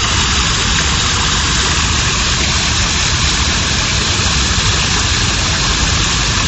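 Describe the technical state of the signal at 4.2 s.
At 4.2 s, as throughout, the sound is watery and cut off above 8.2 kHz: likely MP3 compression near 32 kbps, dropping weak frequency lines.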